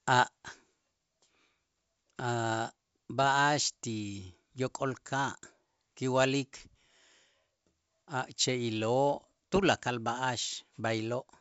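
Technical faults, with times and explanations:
Nothing here counts as a fault: the speech comes over the G.722 wideband telephone link, which is doing just what it should.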